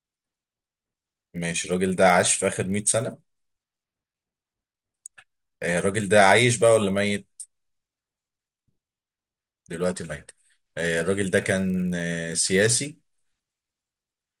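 A resampler restarted on every block runs throughout this speech clip, from start to finish. The sound appears to have been converted in isolated 20 ms chunks, which points to a 24 kHz to 48 kHz upsampling. With no access to neighbouring samples, the converter leaves a small error at every chunk boundary. Those errors repeat at 50 Hz and merge into a low buzz under the speech that drops out whenever the signal goes quiet.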